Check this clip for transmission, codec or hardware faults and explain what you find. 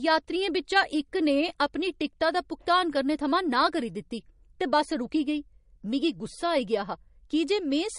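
One codec fault runs through the whole speech clip. From start to finish the sound is watery and swirly, with plainly audible damage, and nothing survives above 10.6 kHz. This hard treble ceiling points to MP3 compression, likely at a low bitrate around 40 kbps. Short of bits, the encoder drops the top band outright and zeroes weak frequency lines, which flicker on and off between frames. A spectrogram would show a flat cutoff at 10.6 kHz and speckled, patchy upper bands.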